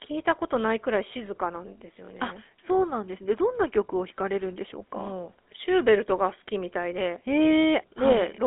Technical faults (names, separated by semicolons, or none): GSM full-rate codec